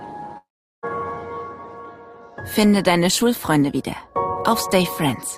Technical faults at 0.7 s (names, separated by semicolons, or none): long network dropout